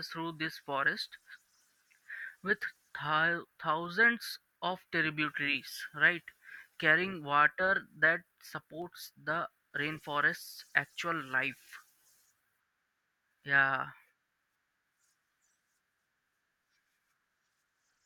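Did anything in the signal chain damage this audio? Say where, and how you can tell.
Yes: lone sharp clicks at 3.86 s and 8.82 s are dropped samples, likely a driver or buffer hiccup skipping a sliver of audio, so the waveform jumps.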